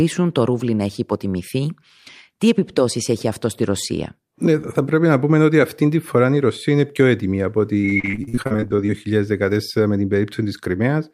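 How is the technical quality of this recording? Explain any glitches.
One stretch is damaged. From 7.81 to 8.90 s, after "είναι πιο έτοιμη από", repeated packet loss strikes. Gaps up to 46 ms get patched by stretching earlier sound, so speech turns choppy and robotic.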